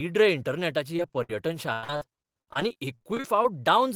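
Packets were lost or arrived too late again and again, causing repeated packet loss (robotic sound). From 0.96 to 1.30 s, several short holes, the longest 56 ms, are patched by stretching the preceding sound. Nearly a third of that stretch is synthetic fill. From 1.73 to 3.45 s the losses return over a longer span, with gaps up to 100 ms and again about 30 % concealed, making the speech choppy and broken.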